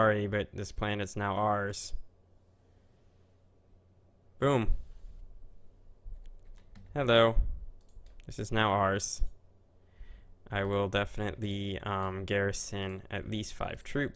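Nothing stood out as a technical problem on listening to this recording.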